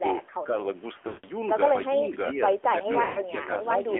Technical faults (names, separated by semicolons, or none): AMR narrowband mobile codec; lost AMR speech frames